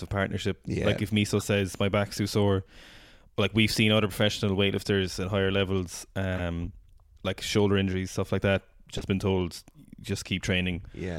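Right after "weightlifters at higher levels", at 6.35 to 6.41 s, there's a corrupt frame decoded blip. Damaged bits got played as-is across a couple of frames, spraying energy to wrong frequencies, peaking at about -20 dBFS. Another, louder chirp (about -15 dBFS, a few frames) follows "injuries stuff like that" at 8.97 to 9.04 s, just before "been told".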